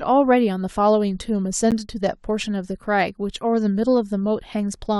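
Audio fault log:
1.71 s, gap between stream segments: a hard-edged hole of about 11 ms of silence cuts into the speech where two stream segments fail to meet. Unlike a dropout, nothing is lost; the speech resumes intact, just pushed about 11 ms later.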